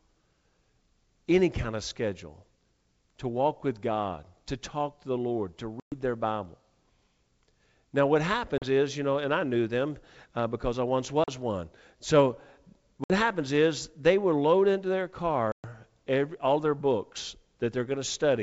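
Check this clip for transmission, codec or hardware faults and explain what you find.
There is one fault: packet loss on an ADPCM call, with hard silent holes at 5.80–5.93 s, 8.58–8.65 s, 11.24–11.29 s, 13.04–13.13 s and 15.52–15.65 s, losing 120, 40, 40, 60 and 120 ms. Missing packets become silence, and the decoder's predictor and step size drift from the sender's. Unlike a clean dropout, the speech comes back slightly distorted and settles within tens of milliseconds. The G.722 wideband coding keeps its light upper-band hiss.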